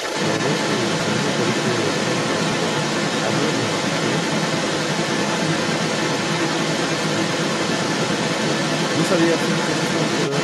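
A speech recording where a second voice runs underneath the whole way through, sitting about 5 dB louder than the main talker. That's the other side's voice leaking through, likely loudspeaker playback the echo canceller never fully removed. There are also three quick jumps in the sound at 1.0, 2.52 and 4.76 s, each skipping ahead a few tens of milliseconds with no gap of silence, which points to a dropped buffer (overrun), the hardware overwriting samples before the program read them.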